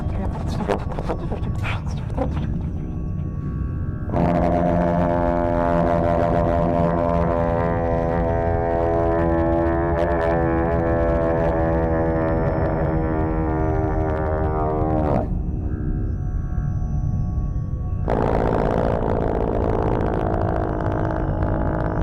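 Hard clipping runs through the whole clip: the signal is driven about 15 dB past what a stage can pass, so a small share of peaks are sliced flat. The result is crackly fuzz on loud moments, abrupt and bright rather than the rounded warmth of soft saturation.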